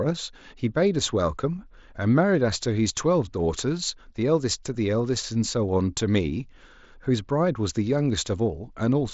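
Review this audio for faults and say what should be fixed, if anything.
Nothing here needs fixing; no faults are present.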